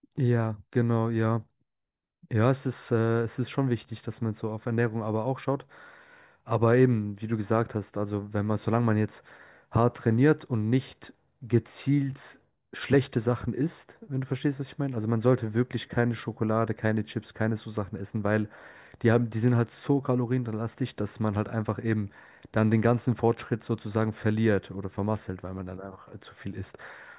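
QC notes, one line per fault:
Nothing stood out on listening to this speech recording.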